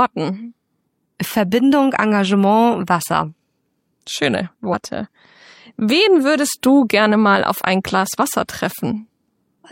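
At 4.69 s the audio jumps ahead by around 50 ms, about one 46.4 ms frame, so you've got compressed frames skipped there. That frame never got decoded, so the audio on either side is joined directly at the gap.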